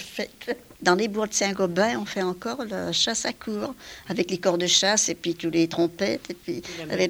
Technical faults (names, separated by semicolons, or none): none